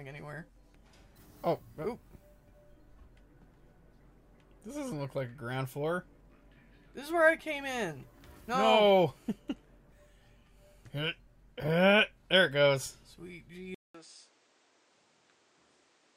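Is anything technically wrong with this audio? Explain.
Yes. At 13.75 s, after a 200 ms silence, the sound drops roughly 10 dB, loses everything above 9.5 kHz and gains a new noise floor roughly 30 dB down until the end. This is likely the input switched to a poorer device.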